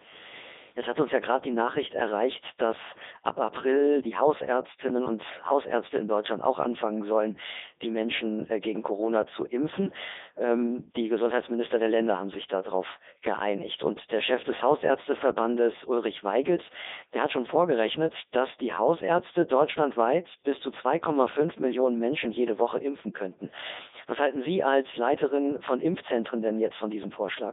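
From start to finish the speech has a robotic, buzzy quality, thin and confined to roughly 250 Hz to 3.7 kHz, with heavy smearing wherever anything other than a single voice appears. This is the Codec 2 vocoder, and the sound fits its highest 3.2 kbit/s mode. The codec keeps only pitch, voicing, energy and a coarse spectral envelope, then rebuilds the voice from sine waves at the decoder, so the original waveform is gone.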